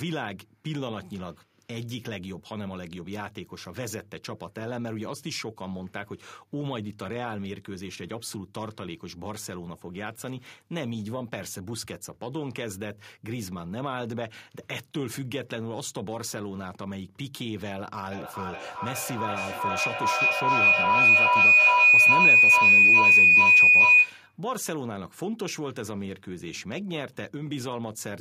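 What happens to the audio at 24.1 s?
At 24.1 s a piercing tone near 3 kHz is still ringing, with repeats roughly every 0.4 s and peaking about 16 dB above the speech, until it cuts off at 24.38 s. This is feedback howl, which began at 18.11 s. Two devices on the same call in one room form a loop from microphone to loudspeaker and back that gains level on each pass. Each repeat grows and narrows toward the frequency the loop favours.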